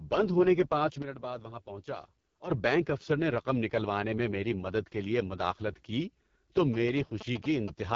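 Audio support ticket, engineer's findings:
Rough, raspy, gritty speech for the whole clip, with a dull top and nothing above 7.5 kHz. Component: AMR wideband (HD Voice) codec at 6.6 kbit/s, its lowest mode, with heavy damage. Mechanism: the pulse-excited vocal tract model gets too few bits at this rate, so voicing turns harsh. The uppermost band is synthesised noise, not real speech detail.

Level drops suddenly by about 11 dB at 1.02 s, just after "بند ہونے کے پانچ". Background noise falls in step, and level recovers at 2.5 s before "بینک افسر نے رقم". Probable component: digital gain stage. Mechanism: likely a gain setting or bit shift applied instantly with no ramp. Signal and noise scale together, which points to the gain rather than a change at the source.

Galloping dit-dit-dit ticks and short buzzes from 6.74 to 7.70 s, after "لیے مداخلت کی تو". Roughly 10 dB below the speech. Component: GSM signalling bursts from a nearby 2G handset in signalling mode. 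Mechanism: RF bursts are rectified in the audio circuitry, leaving a 217 Hz buzz grouped into short clusters.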